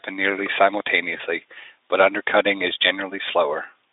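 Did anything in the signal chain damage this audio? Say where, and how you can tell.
Yes. Network packet loss concealed by the speech codec, at 1.17 to 1.20 s. The decoder stretched a gap fitting one 20 ms frame into a brief, fading smear.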